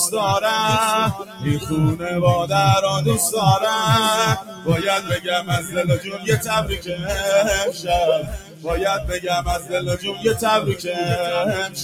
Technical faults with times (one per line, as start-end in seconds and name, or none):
0.00-11.84 noise suppressor applied to music or sounds
1.13-1.71 sound cut by the noise suppressor
4.41-4.68 sound cut by the noise suppressor
5.00-6.29 sound cut by the noise suppressor
6.69-7.09 sound cut by the noise suppressor
7.72-7.88 sound cut by the noise suppressor
8.22-8.68 sound cut by the noise suppressor
9.59-10.25 sound cut by the noise suppressor
10.68-10.85 sound cut by the noise suppressor